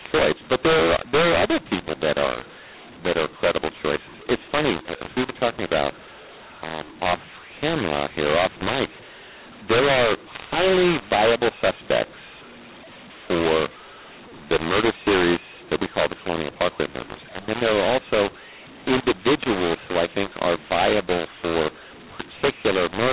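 From start to finish the speech carries a mu-law and A-law mix-up: the G.711 stream was encoded with A-law but decoded as mu-law. Mismatched companding curves scramble sample levels, so the speech sounds harsh and distorted and quiet passages fill with noise, over an otherwise 8 kHz-sampled telephone signal band-limited to 4 kHz.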